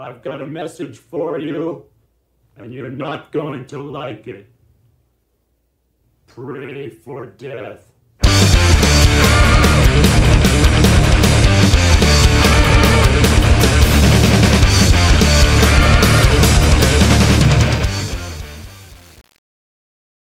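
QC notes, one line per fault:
17.59–20.34 s, truncation distortion on a fade. The fade-out starting near 17.6 s turns gritty from 17.75 s to the end. The fade keeps too few bits and has no dither, consistent with about 7-bit resolution.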